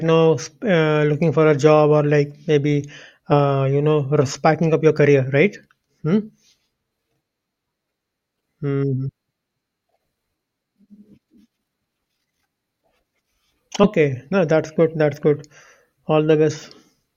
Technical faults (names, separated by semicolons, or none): compressed frames skipped